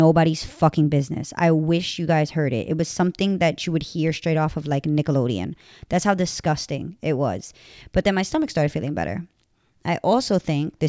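No technical faults can be heard in this speech recording. There is nothing here that needs a time or a value marked against it.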